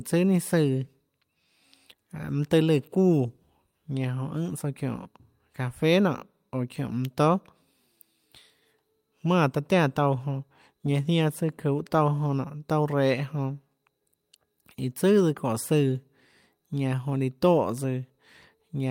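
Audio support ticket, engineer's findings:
Engineer's findings: no audio fault found in the speech on this ticket.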